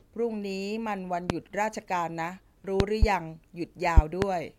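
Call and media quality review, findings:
A loud pop at 1.30–1.33 s, a double pop at 2.80–3.06 s, and another double at 3.97–4.25 s, roughly 25 dB above the speech. Likely voltage pulses from a plug, switch or static. Speech continues underneath.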